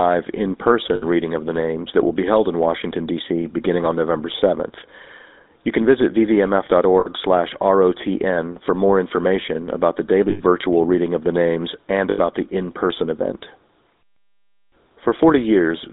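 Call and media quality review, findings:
GSM full-rate codec damage throughout: buzzy, gravelly roughness on speech, band held to 250 Hz–3.6 kHz. A vocal-tract model driven by sparse pulses, which fits 13 kbps full rate. The coarse buzz sets it apart from the smoother muffling of a plain narrowband line.

Lost GSM frames at 0.94–1.03, 7.00–7.08, 10.30–10.41 and 12.10–12.19 s, 60 to 100 ms each. Speech is held as a rough metallic ring while the last good frame repeats. A ringing hold, not the silent gap or click of a dropout.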